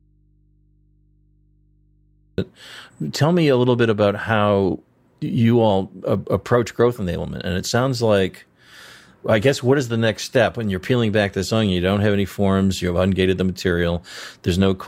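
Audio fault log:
0.00–2.38 s, audio dropout to a faint residue: the signal feed was likely interrupted somewhere upstream while the rest of the chain stayed live, so the recording opens with the speech already missing. For those first seconds only a low mains hum comes through, roughly 40 dB below the level of the talking that follows, which is what an open, unfed input picks up. The speech then cuts back in abruptly at 2.38 s, with no fade.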